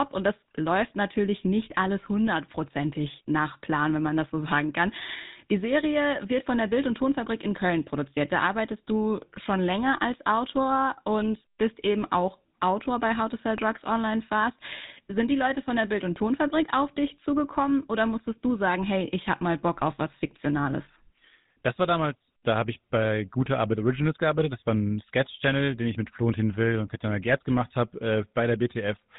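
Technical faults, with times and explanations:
Throughout, GSM full-rate codec: the speech has passed through the original GSM full-rate coder, and the degree of damage fits a 13 kbps stream. The codec models the vocal tract as a filter and excites it with a sparse, regularly spaced pulse train, which keeps only a third of the excitation detail. That coarse excitation gives the speech a plainly audible buzzy, gravelly roughness, and the band stops at 3.8 kHz, so everything above is missing and the sound is muffled.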